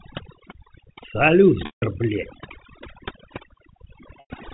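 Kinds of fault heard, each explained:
Overdone noise removal: The noise reducer is set far too hard and runs through the whole clip. Any frequency band that dips near its noise estimate gets pushed down or switched off, so the background drops to almost nothing apart from little twinkling specks. The quieter parts of the speech get caught in the same net. That sits on top of a G.711 telephone band, which cuts off at 4 kHz.
Packet loss with pitch repetition: There are two dropouts, at 1.66 s for about 160 ms and at 4.2 s for about 100 ms. In each, the receiver covers the gap by looping the last pitch cycle, so you get a brief held, buzzy tone. Both gaps run longer than that loop can last, so the tone fades out over roughly 50 ms into silence. The speech then comes back with a short cross-fade.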